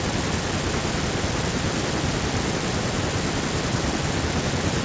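No technical faults occur at any point in the speech, which passes through a G.722 call path at 64 kbps with nothing above 8 kHz.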